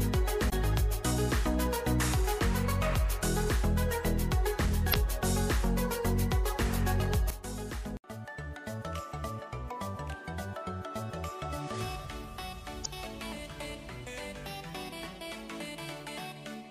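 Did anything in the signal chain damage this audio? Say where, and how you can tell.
Yes. Damaged data in the compressed stream, at the codec stage, gives brief glitches of about 40 ms at 0.49–0.53, 4.90–4.94 and 12.82–12.86 s, where the decoder misreads corrupted frames and resyncs. That frame-level decoding failure, not a plain gap in the signal, separates them from simple dropouts.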